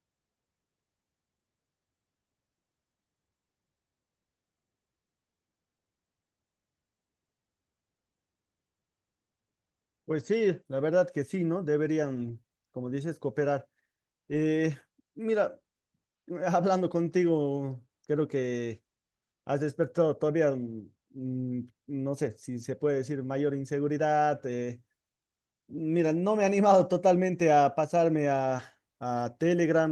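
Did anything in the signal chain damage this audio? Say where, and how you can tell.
Yes, at the network stage. Packets were lost in transit and replaced by the low-bitrate copies Opus carries in the following packet, so nothing drops out. Those rebuilt stretches, at 12.15–12.29 s (80 ms, which fits four 20 ms packets), 14.31–14.33 s, 22.61–22.63 s and 28.59–28.61 s, sound rougher and noisier than the 32 kbps, 12 kHz-band call audio around them.

Also on the network, short concealed packet loss hits 28.57–28.61 s. About 20 ms arrived too late to decode, and the receiver bridged roughly 11 ms by extending the preceding sound before blending back. This is heard as a brief smear or wobble, overlapping the error-corrected repair there.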